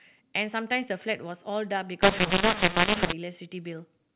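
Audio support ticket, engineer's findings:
Speech harsh and distorted from 2.02 to 3.13 s, with pauses filled with hiss. Probable component is the G.711 decoder, with mu-law and A-law mixed up: mu-law bytes are expanded as A-law, scrambling sample levels and lifting the quietest codes off zero. On the waveform this shows as jagged, uneven amplitudes with no flat silence. On the spectrogram it shows as a raised broadband noise floor through the gaps, still capped at 4 kHz.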